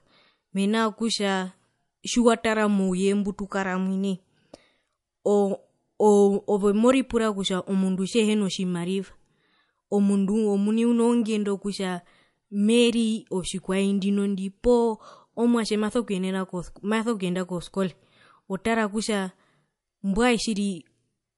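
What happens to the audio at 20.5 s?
At 20.5 s the speech shows the same fault present for the whole clip, low-bitrate audio saved at a high bitrate. Nothing sounds above 11.3 kHz, and the dull texture points to a low-bitrate MP3 source, likely re-encoded at a higher rate that cannot restore the removed detail.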